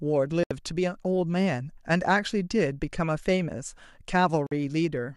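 At 0.43 s the speech cuts out abruptly for about 72 ms, returning at 0.51 s. This is a digital broadcast dropout: the receiver stopped getting usable frames and muted until valid data resumed, so the material sent during the gap is simply gone. The length fits roughly three lost frames. A second, shorter dropout mutes the speech from 4.47 s to 4.52 s, about 48 ms, consistent with two lost frames.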